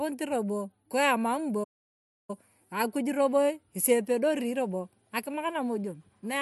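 A playback stall hits this speech clip at 1.63 s, cutting the sound off mid-flow into silence until 2.30 s, a gap of about 650 ms. The player most likely ran short of data or had its output thread blocked, then resumed once it recovered.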